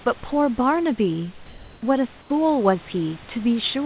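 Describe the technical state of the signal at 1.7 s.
The sender likely stopped transmitting from 1.46 to 1.82 s, so comfort noise in place of the background leaves a steady, featureless hiss about 3 dB off the level of the real background.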